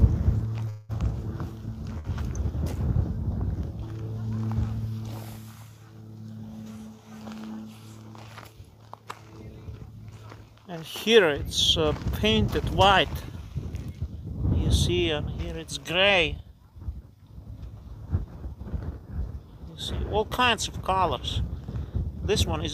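At 0.69 s the audio halts for about 200 ms, to 0.91 s, in a call audio freeze. The last sound carries on as a fading buzz or hiss rather than dropping to silence, then the audio resumes exactly where it stopped. That pattern is likely the result of packets being held up in transit so the jitter buffer drained. Nothing is skipped; instead roughly 200 ms of fill has been inserted, and everything after it plays that much later.

At 1.99 s a shorter event follows, a short stall from a late packet lasting until 2.06 s. One packet missed its playout time, the jitter buffer briefly ran dry, and the receiver stretched the preceding sound for about 51 ms until the packet turned up. It is heard as a sound held slightly too long with a slight buzz or dip. No audio is lost, but the playback delay grows by a further 51 ms.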